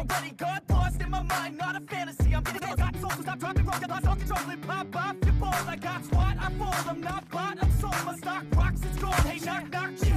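There's a time-stretched section from about 2.39 to 4.41 s, where the audio suddenly races ahead at roughly 1.89 times its normal pace while the pitch doesn't budge. That combination gives it a choppy, rushed feel, with short slices seemingly skipped to squeeze it shorter. The likely cause is software compressing that stretch to fit a target length, dropping small pieces to keep the pitch steady.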